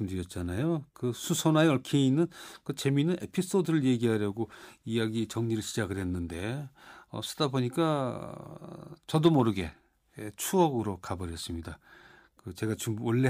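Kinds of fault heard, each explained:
No faults can be heard.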